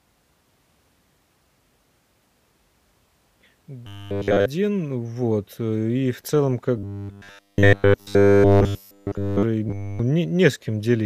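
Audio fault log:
3.87–4.46 s, 6.78–9.43 s and 9.68–9.99 s, robotic sound from repeated short buffers: the speech becomes a rigid metallic buzz locked at 100 Hz, with essentially all of it replaced. This likely comes from a 10 ms buffer looping while real audio is skipped. Unlike distortion, the buzz follows the original speech only roughly.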